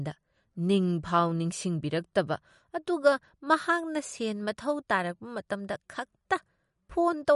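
From start to end the speech carries plainly audible coding damage, with nothing above 11.2 kHz. The likely cause is MP3 compression at a bitrate low enough to fit roughly 48 kbps. With too few bits to go round, the encoder discards spectral detail it judges less important, so weaker frequency components drop in and out between frames, and it removes the top of the spectrum outright, which accounts for the hard treble ceiling.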